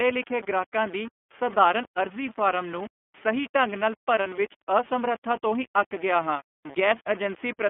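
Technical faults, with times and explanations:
Throughout, low bit depth without dither: the speech was likely quantised to very few levels, around 6 bits, by rounding with no dither, so the error tracks the signal and leaves a grainy, gritty distortion roughly 20 dB below the speech, harshest on quiet passages and decays.
Throughout, iLBC codec: the speech passed through a narrowband VoIP codec, with a bitrate that points to 13.33 kbps and 30 ms frames, confined to a 200 to 3400 Hz line band, so it sounds muffled and plainly rough and synthetic.
4.23 to 4.27 s, lost iLBC frame: one 30 ms frame went missing and the decoder filled it by repeating the last pitch cycle mixed with noise, heard as a brief held, buzzy vowel before the speech snaps back.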